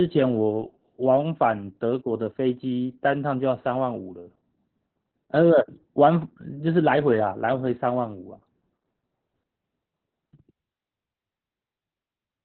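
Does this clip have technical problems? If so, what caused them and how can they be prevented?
Yes. Throughout the clip the speech has been squeezed through Opus voice compression at a very low rate, which fits a bitrate of about 8 kbps in its narrowband SILK mode. At that budget the coder drops everything above about 4.4 kHz and describes the voice's excitation only coarsely, so the speech sounds muffled and telephone-like, with a hoarse, slightly robotic roughness from the heavy coding damage. To prevent it, give the encoder a higher bitrate so it can keep wideband or fullband audio.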